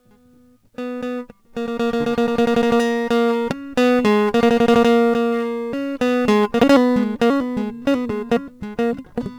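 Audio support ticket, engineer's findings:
Crude rate conversion throughout: inharmonic fizz tracking high, loud music, roughly 30 dB down. Fits unfiltered nearest-sample 44.1-to-48 kHz resampling. Unlike clipping, not level-triggered.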